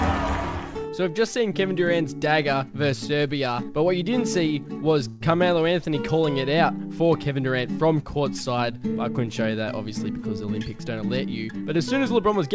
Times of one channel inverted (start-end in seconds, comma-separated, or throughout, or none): none